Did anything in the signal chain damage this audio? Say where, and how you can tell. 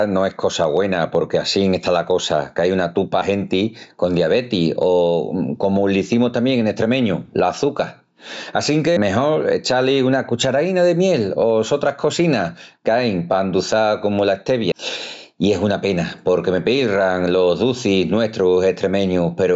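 Yes. Gain pumping runs through the whole clip: the gain swings by about 15 dB, pulled down under each loud syllable, leaving the speech squashed. This likely comes from excessive input gain at the analogue stage driving a fast limiter or compressor.

Audio is missing between chunks at the driver or buffer stage, heard as abrupt skips at 3.22 s, 8.97 s and 14.72 s. Each drops roughly a third of a second, butted together without silence. The regular spacing is likely from 6-second recording chunks losing their boundary.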